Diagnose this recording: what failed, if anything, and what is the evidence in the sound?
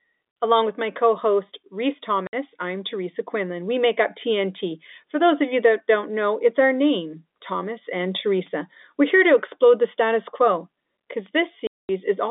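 Network stage: packet loss filled with silence. The speech goes dead from 2.27 to 2.33 s and from 11.67 to 11.89 s, just after "the status quo because", with hard edges. The 60 and 220 ms holes fit 10 ms packets, each replaced by silence.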